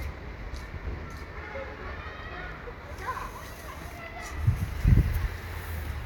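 No technical faults can be heard anywhere in this recording; the signal stays intact throughout, with nothing breaking into or disturbing the sound.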